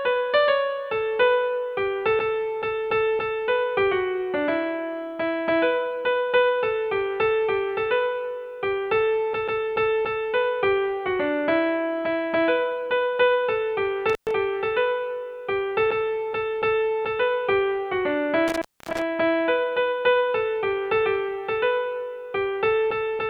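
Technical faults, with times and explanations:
14.10–14.31 s and 18.48–19.02 s, intermittent contact: the sound cuts out with crackle at each edge for about 118 ms, then 269 ms, leaving faint hiss, as a loose cable or plug briefly opens.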